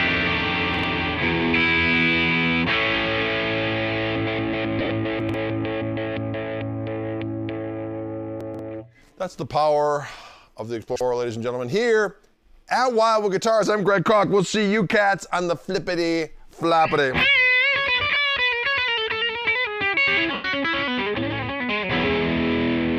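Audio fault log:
0.74–0.84, 5.20–5.34, 8.41–8.59 and 10.82–11.01 s, chunks out of order: a block of about 46 ms plays one, two, three and three blocks late. Nothing is missing, but three hard joins per event give a brief jumbled stutter, with no gap or fade.
4.79–4.90, 18.10–18.17 and 20.33–20.45 s, lost LE Audio frames: 60 ms lost scattered across 105 ms, then 37.5 ms across 60 ms, then one solid 112.5 ms run. The decoder reuses the last spectrum with random signs, so tones smear into noise, and the long run fades toward silence rather than clicking.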